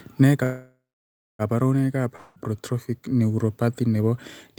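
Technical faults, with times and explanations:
0.43–1.42 s, call audio freeze: a fading buzz, then a flat waveform for about 0.6 s; speech resumes intact, likely after packets stalled.
2.16–2.39 s, long network dropout: about 0.2 s of audio is lost, likely to missing packets; a smeared buzz fills it, blurred flat bands on the spectrogram.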